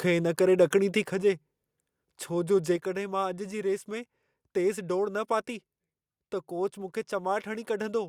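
A speech recording whose microphone input level was likely set too high at the start. Between 0.60 and 0.64 s the loudest peaks overshoot the converter's ceiling by about 1 dB, and the tops of the waveform are sheared flat across roughly one sample in twenty. That is microphone overload, heard as a short, harsh crackle riding on the loudest moment of the speech rather than a clean peak.

The call software then likely reacted to that overload by lowering the device's input volume, a microphone volume step-down that happens twice, at 1.02 s and again at 2.76 s. Each step cuts the level by about 4 dB at once. The voice and the room noise behind it both drop together, so the speech suddenly sounds quieter, with no fade between the two levels.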